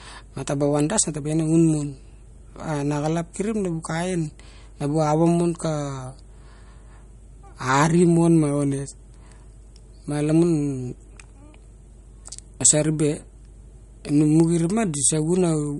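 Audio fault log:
Throughout: MP3 compression. Nothing is present above about 11.2 kHz, so sibilants in the speech lose their top and sound dull. The remaining band has a plainly audible watery, swirling texture, with weak components flickering in and out between frames and consonant onsets smeared. The likely cause is an MP3 encoder short of bits, which fits a low bitrate near 48 kbps, cutting the treble and dropping quiet spectral detail to stay within budget.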